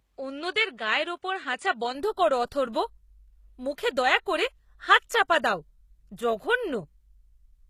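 From the start to about 1.95 s, just before "করো অথর্ব", the top end is missing: nothing reaches above 9.8 kHz. That stretch was likely captured on a poorer input device, such as a second mic or a headset in call mode, before the system switched back to the main one. There's no gap at the switch and no real level jump. The first device adds its own noise floor, sitting roughly 55 dB under the speech, and then the full band simply returns.

Across the whole clip there's plainly audible damage that is likely from HE-AAC compression at a low rate, consistent with something around 20 kbps. The codec spends its bits on the lower spectrum and fakes the treble by copying lower bands upward under a coarse envelope. Those copied highs don't line up harmonically with the real ones below the crossover, so s sounds come out gritty, metallic or lispy.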